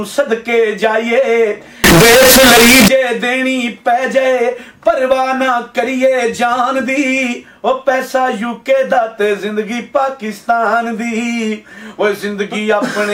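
From 1.84 to 2.88 s the audio turns into a harsh, very loud blast, with quiet background material pushed up to the same level as the main sound. It's the float-read-as-integer fault, likely from 32-bit float samples being interpreted as 32-bit integers, so each value comes from sign and exponent bits. On a waveform that stretch becomes a near-square block sitting at an almost fixed, high level; on a spectrogram, dense broadband energy fills the whole frequency range.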